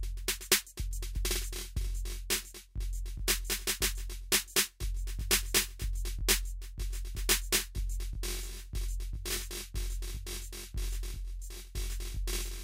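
From 1.87 s to the end, the music shows channel delay (comb filtering). One channel trails the other by roughly 20 ms, and when the two are summed to mono, material common to both cancels at evenly spaced frequencies. The first notch falls down in the low tens of hertz, with further notches repeating up the spectrum at the same spacing. The result is a rough, slightly doubled tone that stays fixed for the rest of the clip.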